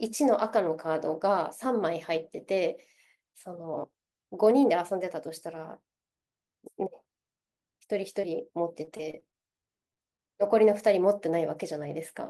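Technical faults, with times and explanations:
8.21–8.25 s, short concealed packet loss: a brief smear where about 20 ms of audio never arrived and the receiver stretched the preceding sound to cover the hole.
8.85–10.21 s, repeated packet loss (robotic sound): choppy sound as eleven short dropouts, the longest 25 ms, are each patched by extending the last sound, about 14% of the stretch.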